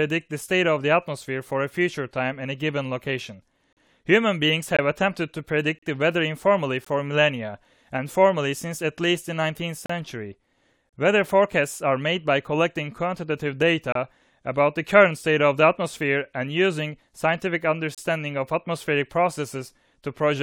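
Gaps between stream segments at 3.73, 4.77, 5.79, 6.85, 9.86, 10.89, 13.92 and 17.95 s: timestamps on the 1-second speech segments fail to meet, so hard-edged silences of 18 to 41 ms interrupt the speech without losing any audio.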